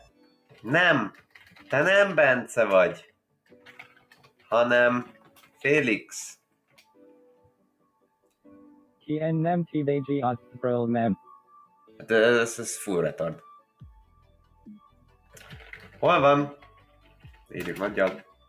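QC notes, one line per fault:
Throughout: noise suppressor applied to music or sounds. A speech-oriented suppressor stays active across the whole clip. It treats steady tones, ambience and reverb as noise and keeps pulling them down. Sudden onsets slip through before it reacts. Sustained parts and tails then sink. The level swings by around 10 dB as the gain rises and falls. That constant riding is what makes the sound pump, flutter and thin out.
0.00–1.70 s, 3.02–9.08 s, 10.38–12.04 s, 13.58–15.36 s, 16.60 s to the end: sound cut by the noise suppressor. In each span the suppressor clamps down harder on material it mistakes for noise. Drops reach about 17, 18, 14, 17 and 13 dB. Most spans lose about a second in total, and the long middle span loses about four seconds. Held and fading sound collapses or ends early, while attacks stay largely intact.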